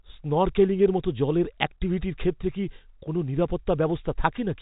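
No faults are present in this speech recording; the G.711 mu-law telephone coding path behaves as expected, giving the band-limited telephone sound with at most faint coding damage.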